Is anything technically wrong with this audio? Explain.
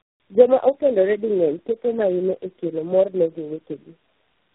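Yes. Tandem speech coding runs throughout: repeated decoding and re-encoding, fitting around four speech codecs in a row, compounds each stage's damage, leaving rough, muffled, warbly speech with nothing above 3.9 kHz.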